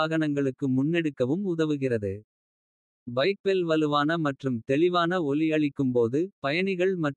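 No technical faults are audible anywhere in the recording.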